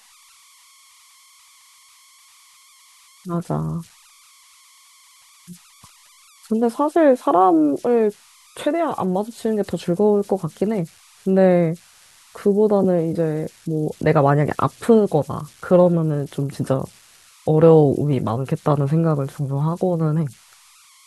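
Converter idle tones run through the whole speech clip. A faint whistle around 1 kHz sits about 32 dB below the signal. It is clearest in pauses. An undithered delta-sigma converter slipped into repeating bit patterns at low levels, producing this tone.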